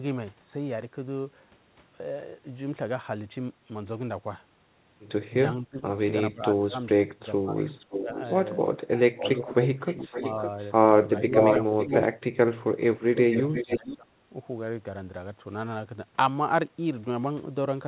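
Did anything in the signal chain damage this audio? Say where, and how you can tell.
Yes. Speech suppressed in double talk at 5.6–8.08, 8.84–10.14, 11.24–11.91 and 12.96–14.17 s: during overlapping talk, speech dips by up to roughly 25 dB, likely from call-processing echo cancellation ducking both sides.

Echo leak at 7.57–8.38, 8.98–10.73, 11.38–12.04 and 13.17–13.95 s: a copy trails 556 ms behind (468 ms at the last), sometimes nearly speech-level, likely uncancelled loudspeaker pickup sent back.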